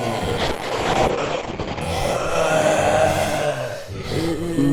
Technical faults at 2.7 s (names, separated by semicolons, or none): none